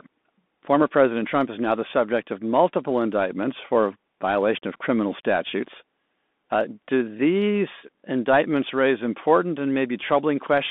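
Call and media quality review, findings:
Bluetooth CVSD headset codec, whole clip. Speech squeezed to roughly 200 Hz–3.6 kHz, grainy hiss underneath, scratchy sibilants. Fits a 64 kbps one-bit delta stream whose adaptive step can't keep up with fast, bright speech. Plainly audible throughout.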